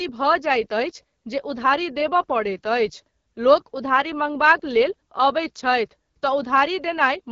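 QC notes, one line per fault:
throughout, AMR wideband (HD Voice) codec: The speech has passed through the AMR-WB coder at one of its lowest rates, which fits the 8.85 kbit/s mode. The band to 6.4 kHz is rebuilt from a pulse-excited vocal tract model with too few bits to follow fine detail, so voicing comes out rough and raspy. The top is synthetic, shaped noise rather than real detail, and nothing remains above 7.5 kHz, so the damage is plainly audible.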